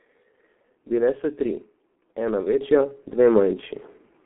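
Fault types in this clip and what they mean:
G.723.1 codec: heavy low-bitrate coding, fitting roughly 6.3 kbit/s, leaves speech muffled and hoarse; the spectrogram shows nothing above 3.4 kHz and smeared consonants.
Microphone volume stepped up: at 2.61 s voice and background jump together by about 6 dB, a sudden step in the waveform envelope.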